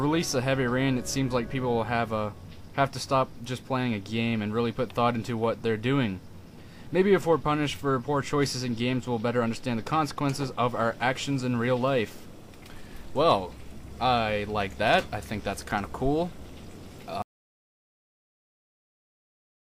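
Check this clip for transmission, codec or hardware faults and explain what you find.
One fault is present: an audio dropout to silence at 17.22 s that runs to the end of the clip, about 2.46 s in all. The input signal was most likely lost, through a disconnected device, a broken link or an accidental mute, while the recorder kept writing silence. The sound stops abruptly mid-flow and gives way to silence with no room tone or noise floor, and whatever followed that point is missing.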